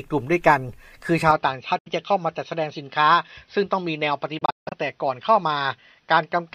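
At 1.31 s the sound abruptly turns duller and boxier and stays that way to the end. Nothing is left above 6 kHz, the level falls by about 5 dB, and a new noise floor appears, well below the signal at roughly 55 dB down. There is no gap at the change. This is an input switched to a poorer device, likely a narrower-band microphone or headset profile. It differs from a dropout because the timbre changes permanently while the audio keeps flowing.

The Bluetooth dropouts are different. At 1.79 s a clean hole of about 70 ms opens, which fits a few lost packets. From 4.39 to 4.74 s the audio breaks up repeatedly, losing about 230 ms in total over 325 ms, with the longest gap about 160 ms. These dropouts are likely caused by packets missing the wireless link. In each case the sound resumes further along, as though it had kept playing. The tone is the same on both sides of each gap, which is what separates these holes from the device switch.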